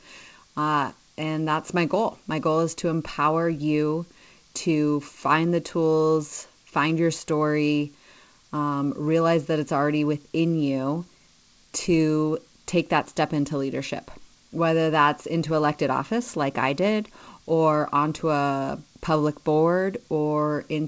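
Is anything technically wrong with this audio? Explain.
No, nothing's actually wrong here: this is speech that came through an ordinary call path, and the content stopping at around 8 kHz is just what a wideband codec like G.722 at 64 kbps normally gives you.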